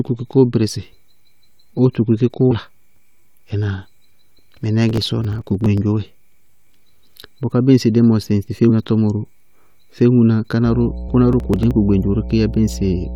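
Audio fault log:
2.50 s, 8.69 s, 11.08 s: damaged data in a compressed stream. Corrupted frames make the decoder lose sync and hunt for the next header, giving brief chirps, clicks or short holes.
4.89–5.78 s and 11.33–11.71 s: processor overload crackle. Runs of missed deadlines on very short buffers, around 1.5 ms, skip slivers of audio, producing crackle or gritty tearing over the speech.
10.65–13.16 s: mains hum. Power-line coupling adds a steady 60 Hz tone, about 10 dB below the speech, running to the end of the clip.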